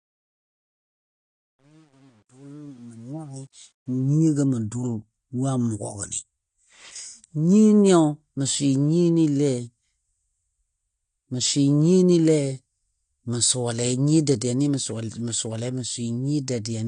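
A fade-in stage without dither from 0 to 4.14 s causes truncation distortion on the fade, consistent with roughly 9-bit resolution. The quiet opening turns gritty, worst from 0 to 3.34 s. Throughout the speech, AAC compression, likely AAC-LC at a low bitrate around 32 kbps, removes everything above 9.8 kHz, leaving the sound dull, smeared and plainly fizzy on sibilants.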